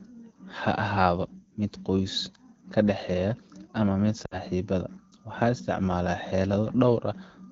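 From 4.25 to 4.38 s the speech briefly smears and fades, then comes back rough for a moment. These are lost AMR speech frames: about 60 ms of corrupted data, which fits three 20 ms frames, so the wideband decoder repeated its last good settings with falling gain.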